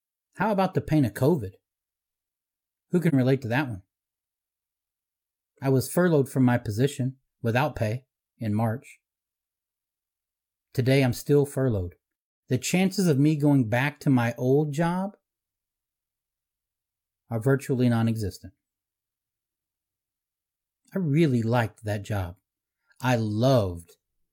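It's a speech clip with one AAC frame loss with muting, a soft-edged gap from about 3.08 to 3.14 s, just before "relate to that one". The decoder zeroed the missing spectrum, and the overlapping windows fade the sound out and back in. The roughly 43 ms hole fits a single dropped frame.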